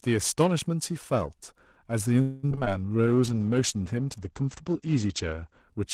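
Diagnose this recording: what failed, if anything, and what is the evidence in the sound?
Periodic clock jitter affects the whole clip and sits at the converter stage. Interference modulating the sampling clock at around 1 kHz puts sidebands at that spacing on either side of every component of the speech. Higher components are hit hardest, so sibilants and upper harmonics carry a rough, metallic edge that disappears in the pauses. That dependence on signal, and its presence from start to finish, separate it from hum or codec grit.

A call audio freeze runs from 2.21 to 2.45 s. The last sound is stretched into a fading buzz for about 0.22 s, and then the speech resumes exactly where it left off, with nothing dropped. The cause is likely packets held up in the network, which let the jitter buffer run dry. This differs from loss because the stream is delayed by the fill rather than cut.

Repeated packet loss (robotic sound) follows at 2.49 to 2.68 s. 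This is a network fault. Five short holes, none longer than 15 ms, are each patched by extending the previous sound, and about a quarter of the span is concealment. The result is choppy, robotic speech with about 120 ms of material actually missing. The rapid succession of small patches and the lost content set it apart from the single, lossless freeze just before it.

A jitter buffer slow-down runs from 2.97 to 3.47 s in the call's buffer stage. To rebuild its reserve, the receiver repeated single pitch periods and bits of pause, adding 78 ms. Playback drops to about 86 % speed while the pitch stays the same, so sounds are drawn out. Unlike a freeze, nothing stops. Unlike tape drag, the pitch does not fall.

A call bitrate drop at the codec stage lasts from 3.08 to 5.68 s. After the bandwidth estimate fell, the encoder went from 32 to 12 kbps and held the low rate for roughly 2.5 s. The audio band narrowed from 20 kHz to 8 kHz, so the speech turns muffled, with coarser coding. 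A sustained loss of top end like this points to bitrate adaptation rather than a filter or lost packets.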